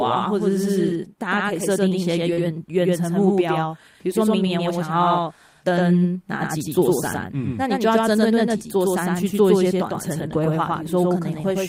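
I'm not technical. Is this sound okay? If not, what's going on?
No. A doubled audio track runs throughout: a second, equally loud copy trails about a tenth of a second behind, likely from a slower capture path or a misaligned edit. At 2.33 to 2.39 s there's a short concealed packet loss: audio arrived too late, so the receiver stretched the previous sound, leaving a brief smear. At 2.37 to 2.39 s, one lost packet was rebuilt from error correction, a rougher backup copy that sounds rougher and noisier.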